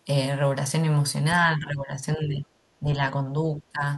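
From 1.4 to 1.96 s, 2.16 to 2.48 s, 2.8 to 3.11 s and 3.59 to 3.83 s the speech dips by roughly 10 to 15 dB. This is speech suppressed in double talk, likely an echo canceller treating the talker as loudspeaker echo and attenuating it.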